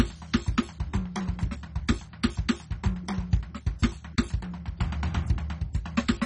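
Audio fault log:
Throughout, MP2 compression: The music sounds dull and closed-in, with nothing above 10.3 kHz. A gurgling, granular roughness runs through it. The damage is heavy, and the cause is likely MPEG Layer II coding at a very low rate, around 32 kbps. This codec divides the sound into 32 equal sub-bands and shares out a small bit budget. With too few bits, the upper bands get dropped entirely. Bands flicker in and out, and the remaining ones are coarsely quantised.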